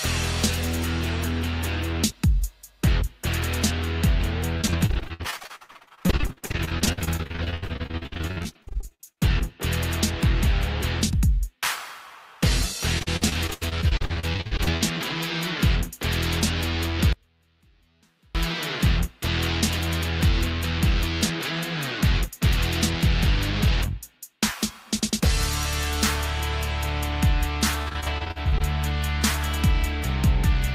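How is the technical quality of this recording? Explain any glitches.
The recording has two kinds of glitch: stretches of choppy packet loss and one clean dropout.

Repeated packet loss (robotic sound) hits three times: 4.57–9.43 s, 12.99–14.82 s and 27.82–28.62 s. Chunks keep going missing, up to about 80 ms each, and the gaps get patched by stretching the last bit of sound. About a third to two-fifths of each stretch is filler, so it comes out choppy with pieces missing.

There's an audio dropout to a faint residue from 17.13 to 18.35 s, about 1.2 s long. The sound cuts out abruptly and only a faint trace remains, roughly 40 dB down. That's most likely the signal being lost while the path after the break stayed live.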